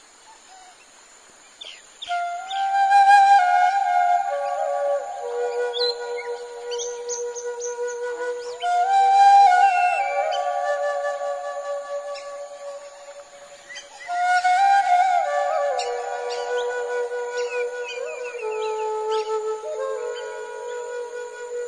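Nothing in the recording stood out as a technical fault on listening.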